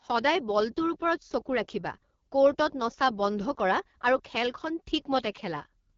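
A speech clip that's been through the AMR wideband (HD Voice) codec the whole way, and the damage is plainly audible. There's nothing above about 7.3 kHz, and the top band sounds like shaped noise rather than real detail. The speech has that rough, raspy edge you get when the pulse-driven vocal tract model is starved of bits, which fits one of the two lowest modes, most likely 8.85 kbit/s.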